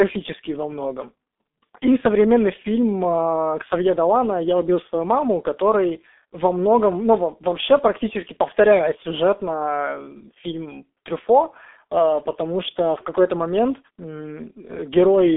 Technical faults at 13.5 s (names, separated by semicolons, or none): G.723.1 codec